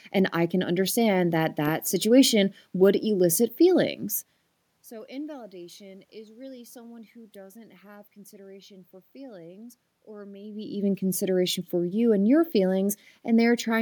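No technical faults are audible in this recording.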